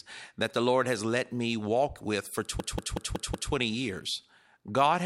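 After "me walk with for", 2.60 to 3.53 s stutters through five repeats of one 186 ms fragment: a system hang loop, replaying a frozen buffer that fits 8192 samples.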